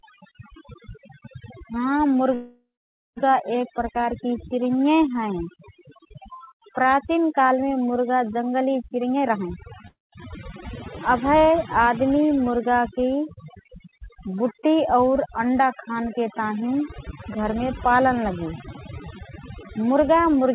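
Speech runs through the whole clip with overdone noise removal. The background drops and breaks up into twinkling specks. Weak spectral bands near the noise level were cut hard, and quiet parts of the speech went with them. The audio has no content above 4 kHz, which fits a G.711 mu-law call path at 64 kbps. There are two call audio freezes. From 2.34 to 3.19 s, the last sound is stretched into a fading buzz or hiss, and about half a second of that is silence. The speech then picks up where it stopped. From 9.88 to 10.14 s, a shorter hold lasts about a quarter second, including roughly 0.18 s of silence. Both are likely caused by delayed packets draining the jitter buffer. There is also jitter buffer speed-up. From 8.85 to 9.67 s, the speech runs at 131% with unchanged pitch and sounds hurried, as about 0.3 s of pitch periods is cut out. From 18.14 to 20.51 s, a milder 104% speed-up trims around a tenth of a second.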